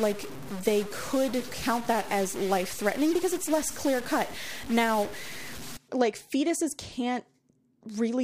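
From 0.0 to 5.77 s, just before "like fetuses", a stuck bit adds harsh, buzzy distortion and fills pauses with noise. A likely broken data line or converter shifts values by a fixed step of roughly -35 dBFS.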